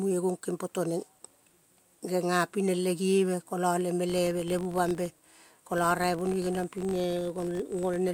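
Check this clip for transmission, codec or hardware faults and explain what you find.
There's one fault here. From 4.10 s to the end, the filter restarted on every block: each block starts from silence, leaving a level-following buzz near 46.9 Hz, which fits 1024-sample blocks.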